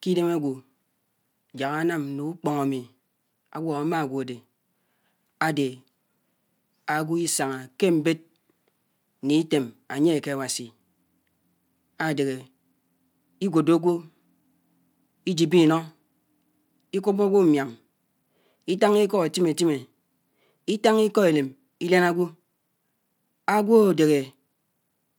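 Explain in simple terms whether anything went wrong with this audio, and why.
Nothing went wrong that I could hear: listening to the whole recording of speech, nothing stood out as a fault.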